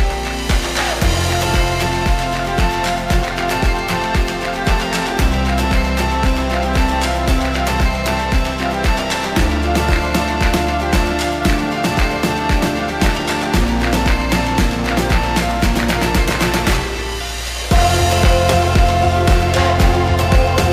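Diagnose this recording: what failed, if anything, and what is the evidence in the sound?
The converter's sample clock is being shaken by interference at a single rate, around 2 kHz, throughout the recording. This periodic clock jitter puts sidebands roughly 2 kHz above and below every component, heaviest on high-frequency content, giving a rough, metallic edge that disappears whenever the sound falls silent.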